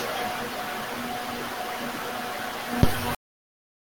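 A speech recording whose final buffers were never written, a cut-off end: at 3.15 s the speech halts mid-sound and falls straight into digital silence without any decay.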